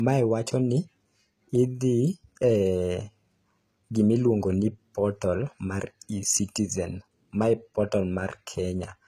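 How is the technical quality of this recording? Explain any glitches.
The technical quality is limited, though the file is stored at a high bitrate. The speech has a hard ceiling at about 14.9 kHz, with nothing above it. Low-bitrate smearing and swirl are audible for the whole clip. This is low-bitrate audio saved at a high bitrate. The likely cause is an earlier very low-rate encode, around 20 kbit/s with a parametric codec, re-saved as high-rate MP3. The second pass preserved the damage. It could not restore the lost detail.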